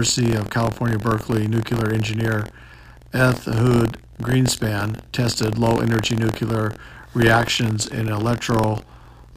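A robotic rattle at about 43 Hz runs through the speech from start to finish, riding on the sound and dropping away when there is no signal. It is buffer tearing: the writing program and the hardware reading the ring buffer have slipped, so in every period a small slice, a few percent, holds audio from roughly 50 ms earlier, hard-joined at both edges. That rate fits a 1024-sample buffer.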